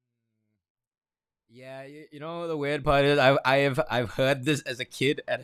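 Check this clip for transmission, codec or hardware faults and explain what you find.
Nothing stood out on listening; the speech simply rises in a smooth fade-in from the very beginning until 3.26 s, with no click or hard edge.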